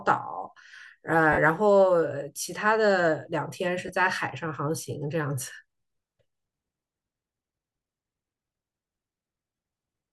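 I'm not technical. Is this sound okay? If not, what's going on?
No. The speech has three short dropouts from lost LE Audio frames: 1.32 to 1.38 s, 3.87 to 3.89 s, and 9.56 to 9.58 s. Bluetooth sends audio in tiny packets, and a few went missing. The receiver covered each gap with a rough noisy copy of the sound just before it. The first gap is the longest, about 52 ms, which fits seven 7.5 ms frames, so it sounds like a brief noisy smear. The light grainy edge on the speech is likely from Bluetooth LC3 compression.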